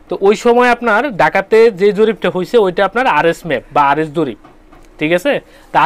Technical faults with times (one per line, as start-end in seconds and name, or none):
none